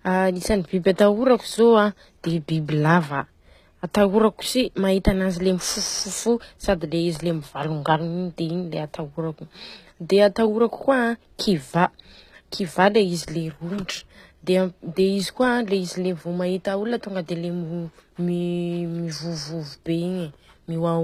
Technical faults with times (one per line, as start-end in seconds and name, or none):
0.00-21.03 HE-AAC compression